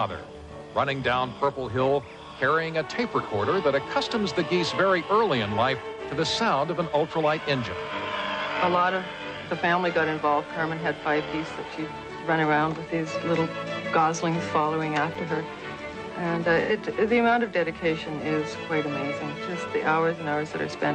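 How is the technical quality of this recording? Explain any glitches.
The recording has two kinds of glitch: three brief smeared patches from AAC frame loss with concealment, and one tiny dropout from a block of digital silence.

The AAC frame loss with concealment occurs at 3.21 s (about 43 ms, fitting one lost frame) and at 5.90 s and 16.61 s (about 85 ms each, fitting two frames). The decoder rebuilt the missing audio from the last good spectrum, so each spot sounds briefly smeared and phasey rather than empty. Unlike a true dropout, the sound never actually stops.

The block of digital silence at 15.15 s lasts 5.8 ms, which fits a 256-sample buffer that wasn't filled in time. The signal drops straight to silence and back with no fade, so it comes across as a tick or dip rather than the soft smearing of concealment.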